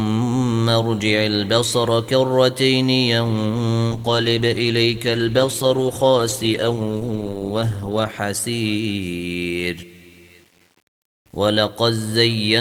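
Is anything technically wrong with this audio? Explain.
Yes, there are two faults.

Low bit depth without dither runs through the whole clip. Quiet passages sound grainy and gritty, and the grain rises and falls with the sound instead of sitting underneath it as a steady hiss. That tracking is what separates it from ordinary background noise. The likely cause is rounding to very few bits, around 9, with no dither to smooth the steps. This leaves an error floor roughly 40 dB below the signal.

A call bitrate drop runs from 3.91 to 8.29 s. For about 4.3 s the audio turns rough and watery and loses its top end. The sound fits the encoder's budget falling from about 48 to about 15 kbps after the call's bandwidth estimate fell, which forces coarser coding and a lowered cutoff. Unlike the grain, this change is confined to that window, and the quality returns once the bitrate recovers.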